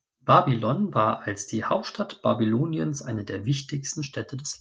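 No technical faults can be heard in this speech recording at any point.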